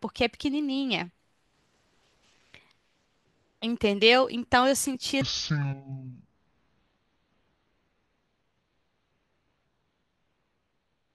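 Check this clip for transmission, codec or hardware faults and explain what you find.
One fault is present: a section at the wrong speed. From 5.21 s to the end at 11.15 s, the speech runs at 0.55 times its recorded rate, likely from playback against a mismatched clock. Pitch drops about ten semitones, giving a deep, dragging sound. On a spectrogram, harmonics and formants shift downward and crowd together. In the waveform, syllable envelopes stretch to nearly twice their length.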